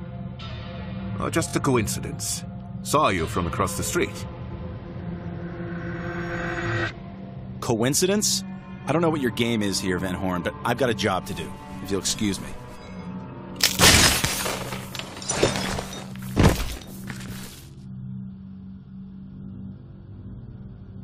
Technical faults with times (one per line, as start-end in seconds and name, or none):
1.47-1.52 repeated frames
20.61-20.65 repeated frames